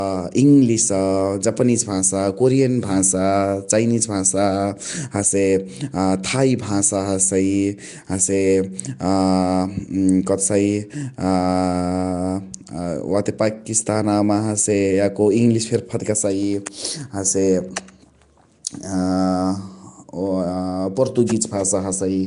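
Throughout the speech there is a rough, hissy halo and a smeared, underwater quality, with plainly audible coding damage and nothing above 10.6 kHz. The likely cause is Nellymoser compression, the Flash microphone codec, at a rate that points to around 44 kbps. Its fixed two-bit-per-sample coding of 256-sample blocks fills starved bands with noise. That hiss follows the speech's own spectrum instead of sitting under it as a steady floor, which separates it from plain background noise or low-rate MP3 swirl.

At 16.66 s an attack is preceded by a brief burst of hiss, about 11 ms long, and the onset sounds softened. This is pre-echo. The sharp attack fell late in a transform block, and the quantisation noise spread across that block leaked into the quiet instant before it. Because the hiss comes just before the attack and not after it, it is distinct from a click or from reverberant smearing that trails a sound.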